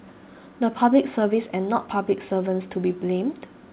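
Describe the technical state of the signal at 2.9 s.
At 2.9 s the speech is intact, with no fault present, only the narrow call bandwidth that tops out at about 4 kHz as expected for a G.711 call.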